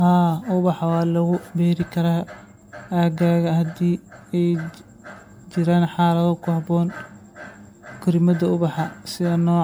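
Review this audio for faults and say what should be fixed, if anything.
Generation loss throughout: the speech sounds swirly, hollow and smeared, with blurred attacks, likely from roughly seven MP3 re-encodes, each stacking fresh quantisation noise. To prevent it, keep a lossless master and encode to MP3 only once, at the very end.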